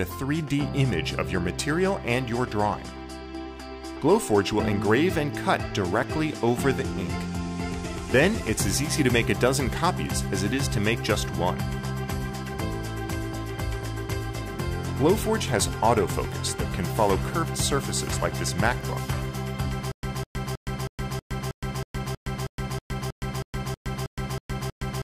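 From 19.92 s to the end, a stutter with silent gaps: a 203 ms burst repeats 16 times, each followed by 116 ms of silence, on an even 319 ms cycle. The likely cause is a stalled stream replaying its last fragment, so the audio due there is lost. Unlike a seamless loop, silence separates every repeat.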